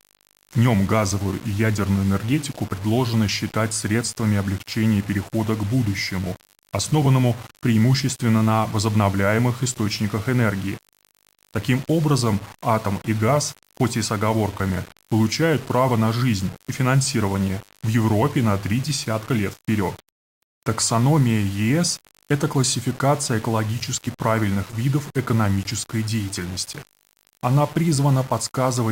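A steady, raspy buzz sits under the speech from start to finish, quiet at roughly 35 dB below it. This is mains buzz from the 50 Hz supply: sharp switching spikes twice per cycle leaked in, spreading harmonics of 50 Hz up into the kilohertz range.

Running through the whole clip too is a grainy, gritty distortion that rises and falls with the speech, sitting only about 20 dB below it, with the quietest moments breaking up or sputtering. The likely cause is low bit depth without dither, consistent with the signal being rounded to about 6 bits.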